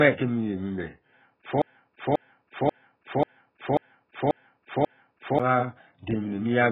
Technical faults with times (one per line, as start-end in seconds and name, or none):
0.00-6.72 AAC compression
1.62-5.40 broken-record loop